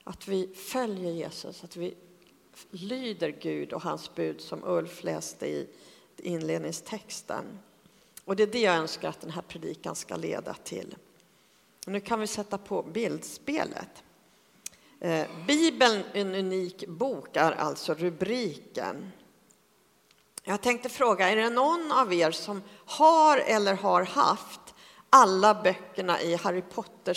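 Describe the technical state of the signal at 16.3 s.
At 16.3 s the signal is intact, with no dropout, distortion, noise burst or other technical fault audible there.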